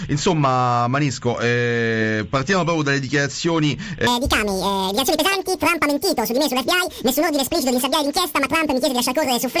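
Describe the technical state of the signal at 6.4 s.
Wrong sample rate, from 4.07 s to the end: playback runs at double speed, which fits 16 kHz material played at 32 kHz, raising pitch a full octave.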